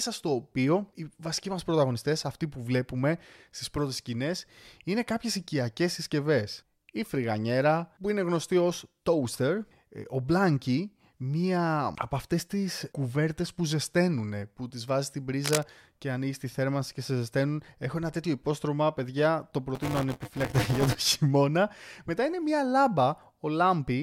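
From 15.44 to 15.63 s, between "που τις βάζει στην" and "και ανοίγει τη θέρμανση", cable scratch noise adds rough, uneven rustling about 5 dB below the speech, likely from a worn connector being moved rather than steady hiss.

From 19.75 to 20.95 s, after "τέτοιο υπόστρωμα παιδιά το", buffer tearing produces a robotic 200 Hz rattle. Roughly 15% of each buffer replays audio about 15 ms old, present only while speech sounds.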